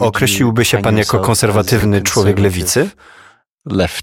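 At 1.79 s, a 26.1 ms block of compressed speech was delivered twice, consistent with one duplicated frame: repeated frames, heard as a brief stutter that lengthens the audio by 26.1 ms.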